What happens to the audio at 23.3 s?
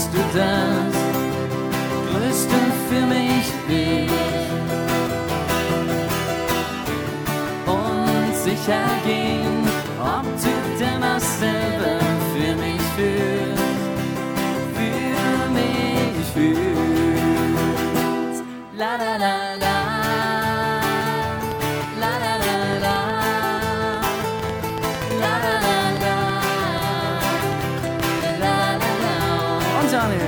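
At 23.3 s you're right in the middle of a train of clicks that runs from about 21.52 to 28.30 s. Roughly thirty sharp, near-identical pops land on top of the audio at an uneven pace, averaging about 4.7 per second, and they poke out around 10 dB above the sound itself, so they're hard to miss, gaps included. That pattern most likely comes from electrical interference or a faulty connection or power supply.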